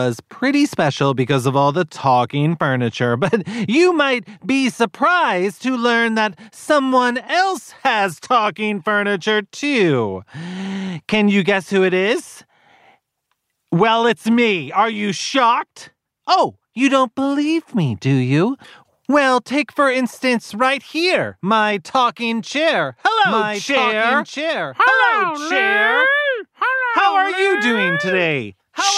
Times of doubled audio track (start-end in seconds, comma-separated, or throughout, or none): 23.25-28.98